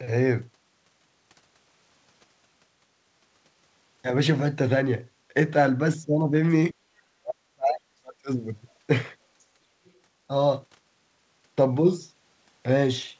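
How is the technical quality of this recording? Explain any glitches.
The recording has two audible glitches: short dropouts in the speech and a brief trace of a second voice. The sound also stops at 8 kHz, which fits a G.722 call at 64 kbps.

Speech suppressed in double talk, from 6.72 to 6.78 s and again from 7.13 to 8.29 s. The speech dips sharply, by around 30 dB in the first spot. In the second it falls by around 40 dB, for roughly a second in all. The likely cause is an echo canceller that heard both sides at once and turned both down. The voice sinks or breaks up in pieces, then returns.

The other side's voice leaking through, at 9.85 to 9.91 s. A faint scrap of a second voice appears, about 40 dB below the speech. The likely cause is an echo canceller that left some of the loudspeaker signal in the microphone. The scrap is very brief and quiet.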